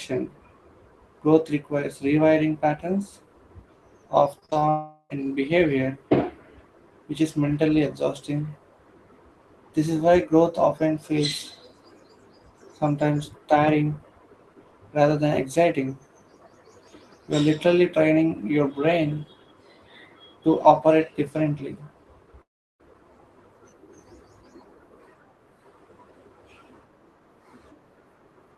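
From 4.39 to 4.63 s there is repeated packet loss, giving a robotic sound. Five short gaps, the longest 29 ms, cut about 100 ms of audio. Each gap is patched by stretching the sound before it. Concealment covers 42% of this span, so the audio sounds choppy, with pieces missing.

At 4.69 s the audio breaks off again until 5.12 s, likely from a long network dropout. About 400 ms of speech never arrives. The last sound is extended as a fading buzz or hiss, with roughly 40 ms of silence before the audio returns.

From 22.42 to 22.81 s a similar gap appears, again likely a long network dropout. About 380 ms is lost. A brief buzz or hiss fades quickly, and about 350 ms is near silence. The speech then resumes with the lost part missing.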